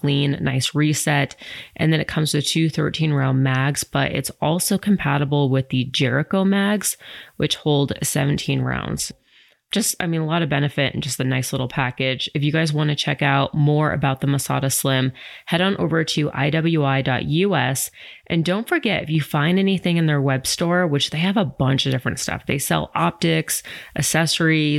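No technical faults can be heard anywhere in the recording; the speech signal stays continuous and intact throughout.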